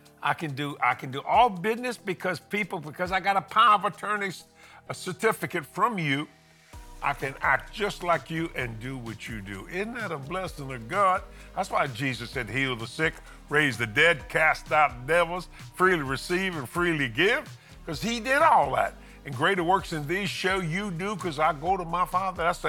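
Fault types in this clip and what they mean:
Wrong sample rate: from 3.68 s to the end, the audio plays back slower and lower than it should, at about 0.919 times its proper speed and roughly 1.47 semitones flat. Because the samples are read out at a lower rate than they were captured at, with no conversion, tempo and pitch drop together by the same ratio. That ratio fits 48 kHz material being played at 44.1 kHz, so the shift is slight.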